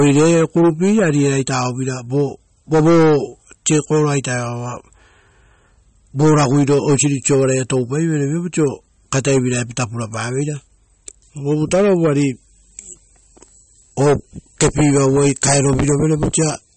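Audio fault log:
Throughout, MP3 compression: the speech has nothing above 8.4 kHz and a plainly audible watery, swirling texture, with sibilants turning chirpy and metallic and consonant onsets smeared. This is likely a low-bitrate MP3 encode, around 34 kbps, where the encoder cut the treble and let weak frequency lines blink on and off between frames.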